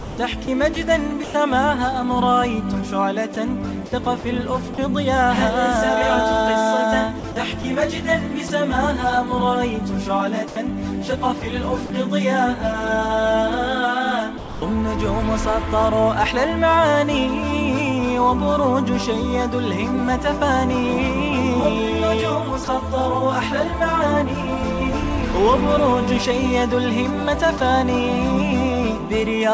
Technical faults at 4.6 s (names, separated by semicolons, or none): sound chopped by the voice detector